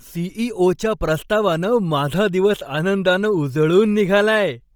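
Throughout the speech, the upper spectrum sounds thinned and patched with noise, giving a breathy, grainy edge. Nothing sits above 20.2 kHz. This is likely Bluetooth LC3 compression, heavily damaged, which fits a low bitrate near 32 kbps with 10 ms frames.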